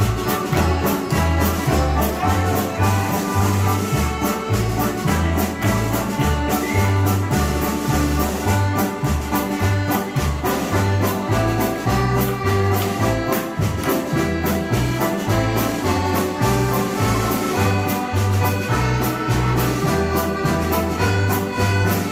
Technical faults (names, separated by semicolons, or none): none